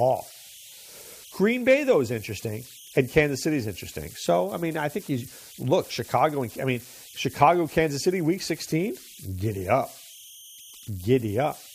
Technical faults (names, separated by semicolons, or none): converter idle tones